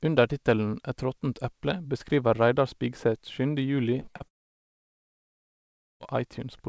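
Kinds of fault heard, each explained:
Repeated packet loss (robotic sound), 4.00 to 4.22 s: four short holes, the longest about 33 ms, are each patched by stretching the preceding sound. Nearly half of this brief span is filled-in material, so the speech turns choppy and mechanical, with fragments missing.
Long network dropout, 4.28 to 6.02 s: the speech cuts off and roughly 1.7 s of near-silence follows before it resumes, with that stretch simply gone. The likely cause is the audio stream ceasing to arrive for that long, leaving the receiver nothing to play.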